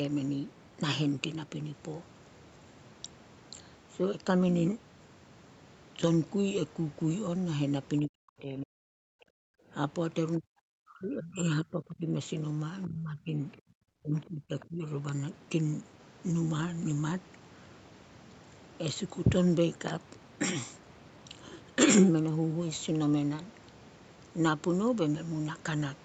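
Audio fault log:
8.06–8.9 s, 10.38–12.08 s, 12.87–13.36 s, 13.89–14.85 s, speech suppressed in double talk: the talker's voice dips by up to roughly 40 dB, likely because the echo canceller mistook overlapping talk for echo.
9.18–9.7 s, background gated by the echo canceller: the room sound drops by about 33 dB for half a second, as the canceller clamps the microphone while the loudspeaker plays.
14.6–14.65 s, other side's voice leaking through: a brief scrap of a second voice, roughly 25 dB below the talker, is likely loudspeaker echo that the canceller left behind.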